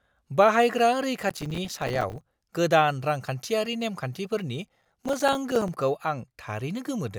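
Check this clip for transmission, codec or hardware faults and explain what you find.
Two bursts of processor overload crackle break up the speech. From 1.30 to 2.21 s, and again from 4.67 to 5.69 s right after "रांखान्थियारि नेमखान्थिफोरनि", a gritty, tearing crackle rides on the sound. The processor missed many buffer deadlines in a row, and each miss left a hard-edged silent gap, consistent with buffers of roughly 5 ms. The first burst is denser.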